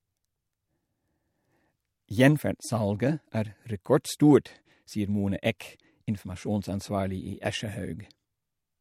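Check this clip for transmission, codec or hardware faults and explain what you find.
A single codec fault stands out: pre-echo at 5.59 s. A hiss, about 17 dB above the quiet before it, runs 16 ms ahead of a sharp onset and blurs its attack. The codec spread quantisation noise across a whole transform block, consistent with a 26 ms window and no short blocks, so noise sized for the attack leaked backward into the silence.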